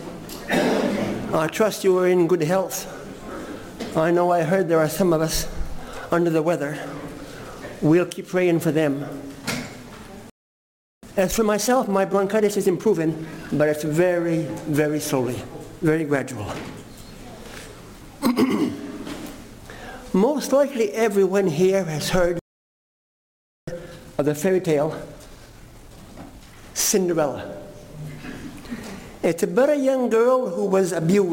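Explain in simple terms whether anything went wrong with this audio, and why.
The sound cuts out twice, at 10.30 to 11.03 s and 22.39 to 23.68 s. That is a playback stall, likely a player starved of data.

Each stall is followed by time-compressed catch-up, from 11.03 to 13.95 s and 23.68 to 26.68 s. The sound runs about 1.25 times faster at normal pitch, unlike a sped-up tape, which would rise in pitch.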